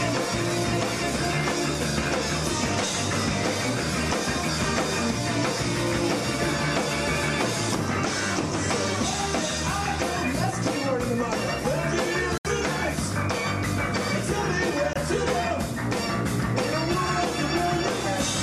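The audio drops out twice from corrupt frame muted. At 12.38 to 12.47 s it cuts abruptly to silence for 88 ms. At 14.93 to 14.96 s a 32 ms hole follows. The decoder rejected damaged frames, and silence replaced them. The gap lengths point to three frames, then one. Timing holds.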